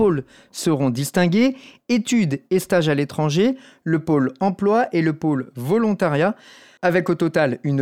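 No technical faults can be heard anywhere in the speech. There is nothing here that needs a time or a value attached to it.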